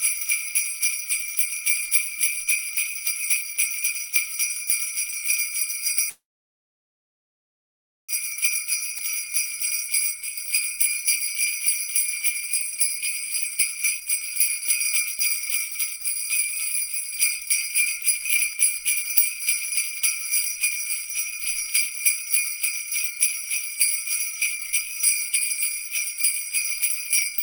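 From 6.09 to 8.11 s there's a call audio freeze: the last bit of sound carries on briefly, then it's about 1.9 s of silence before playback resumes right where it stopped. Nothing's lost, just a gap, likely from packets held up in transit draining the jitter buffer.

Then comes a jitter buffer speed-up from 8.63 to 11.05 s at about 104% speed, trimming roughly a tenth of a second. The receiver is snipping out tiny pitch-period chunks to work off the built-up delay, so the audio runs slightly faster without any pitch change.

Inside that stretch, around 8.98 to 9.01 s, there's a skip ahead. Roughly a second of audio is dropped and the two sides are butted together almost directly, so playback jumps forward instead of pausing.

The jitter buffer speed-up returns at 12.48 to 16.16 s (about 108%, cutting around a third of a second) and again at 16.87 to 23.77 s (about 107%, roughly half a second removed). 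Both stretches sound noticeably rushed at an unchanged pitch.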